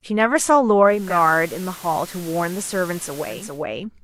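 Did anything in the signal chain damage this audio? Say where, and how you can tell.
Yes. The damage is at the radio reception stage: digital radio blending to FM analogue from 0.81 s to 3.66 s. Each cross-fade takes about 422 ms. Hiss rises to roughly 20 dB below the speech, and level drops about 1 dB. The receiver lost digital lock and fell back.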